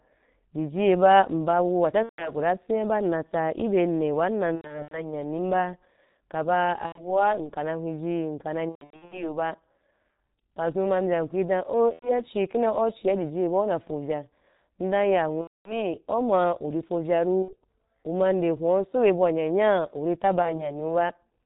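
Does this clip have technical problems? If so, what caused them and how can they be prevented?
Yes. The whole clip passes through the G.723.1 codec at 6.3 kbit/s, heavily damaged. Speech sounds muffled and hoarse, with smeared consonants. A spectrogram shows a hard ceiling at 4 kHz and blurred fricatives. Using a wideband codec such as Opus at a higher bitrate would prevent it.

VoIP packet loss concealed by the speech codec occurs at 2.03–2.32, 4.55–5.13, 6.86–7.16, 8.69–9.39, 11.93–12.21, 15.42–15.90, 17.43–17.54 and 20.42–20.75 s. In each gap the decoder repeats its last pitch and filter, giving a buzzy tone or coloured noise that fades. On a spectrogram this appears as frozen, decaying bands, and the speech after each gap stays weak or distorted. A jitter buffer with forward error correction on a less congested network would prevent it.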